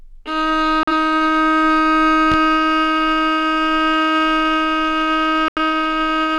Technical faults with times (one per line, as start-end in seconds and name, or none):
0.83-0.93 digital broadcast dropout
2.32-2.35 loud pop
5.48-5.58 digital broadcast dropout